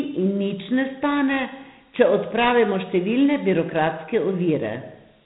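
Dialogic VOX ADPCM coding runs throughout this speech clip: the band stops near 3.9 kHz, and coarse 4-bit steps leave a gritty hiss trailing the speech, consistent with 32 kbps.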